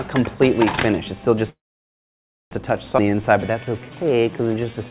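The audio runs through a G.711 mu-law call path, so a spectrogram shows nothing above 4 kHz. A call audio freeze from 1.5 to 2.53 s stretches the last sound into a brief fading buzz or hiss, then about 0.96 s of flat, empty waveform. Packets were likely held up until the jitter buffer ran dry. At about 2.97 to 3.00 s a skip ahead cuts roughly half a second of audio, leaving an abrupt splice with an 11 ms join in the waveform. From 3.05 s to the end, a jitter buffer slow-down repeats pitch periods and adds 230 ms, so playback runs at 88% speed at unchanged pitch.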